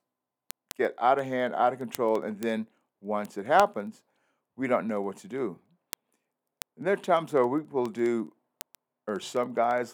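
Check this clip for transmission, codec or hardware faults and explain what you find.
One hardware fault is present. Word clock ticks run from 0.16 s to 9.92 s: the receiving device reads the digital speech link on its own unlocked clock, drifting by a few hundred ppm, so a single sample is slipped roughly every 70 ms. That produces around 150 sharp, steady ticks.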